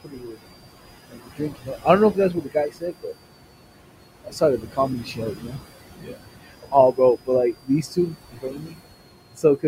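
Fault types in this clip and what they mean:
Switching supply whistle: a thin, high whistle wandering between about 4.2 and 5.0 kHz sits well below the speech throughout. Its drifting pitch points to a power supply changing load, unlike a steady mains hum or a fixed feedback tone.
Noise suppressor artifacts: the room noise, about 10 dB below the speech, is pulled down by about 21 dB between phrases and rises again under them. Unlike a simple gate, the change works band by band rather than muting everything.
Speech cut by the noise suppressor: in six stretches between 0.04 and 9.65 s, soft consonants and word endings drop by up to about 21 dB along with the noise and sound swallowed. Unlike a dropout, the speech is thinned rather than silenced, and its quietest parts fade.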